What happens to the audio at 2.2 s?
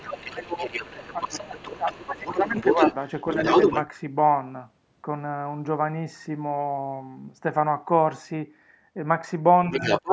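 At 2.2 s the main talker is being pushed down by speech suppressed in double talk, from 1.75 to 2.57 s. Both sides seem to talk at once here. The echo canceller likely could not tell its own talker from the loudspeaker echo, so it turned both down. The voice dips sharply, by a deep margin, for most of that stretch.

The other side's voice leaking through is also present, from the start of the clip to 3.91 s. A second voice sits only a little below the main talker. It is likely loudspeaker sound that the echo canceller left in the microphone signal.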